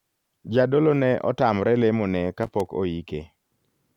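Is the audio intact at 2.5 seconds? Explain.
No. At 2.5 seconds the speech is caught in a burst of loose connector crackle running from 2.43 to 2.68 s, just after "ne otamre lemo ne". A worn or dirty contact keeps making and breaking, chopping the signal on and off, so the sound turns into an irregular scratchy crackle. Unlike evenly spaced digital clicks or a clean dropout, the breaks here are ragged and unevenly timed, as a physical contact would produce.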